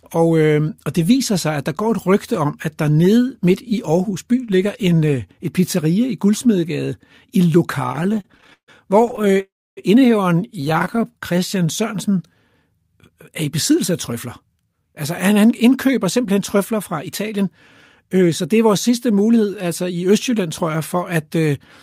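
Speech that starts to judder at 7.89 s. Until 9.40 s it breaks into about 30 brief holds, the longest about 145 ms, with nearly a third of that stretch being stretched-out tail sound. These are repeated stalls (stutter): packets arrived late, the jitter buffer kept emptying, and the receiver extended the last sound until data came back, so nothing is lost but the speech drags. From 9.40 to 9.79 s a call audio freeze follows. A fading continuation gives way to roughly 280 ms of silence before the speech resumes where it stopped, pushing everything about 367 ms later, likely because packets were held up in transit. A second, lighter stutter runs from 10.61 to 11.05 s with many tiny holds of up to 15 ms, adding about 142 ms. From 11.11 to 12.35 s the speech plays at 91% speed without changing pitch, drawn out by about 118 ms. That is jitter buffer slow-down, with the receiver repeating pitch periods to rebuild its reserve. 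From 14.12 to 17.41 s the opposite happens. The speech is hurried at 106% speed with roughly 200 ms trimmed away, a jitter buffer speed-up that cut the excess delay by dropping small pitch-period pieces.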